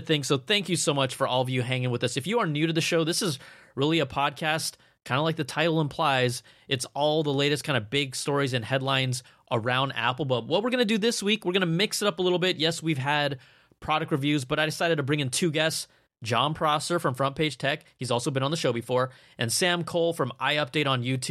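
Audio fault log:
No faults are audible anywhere in this speech recording.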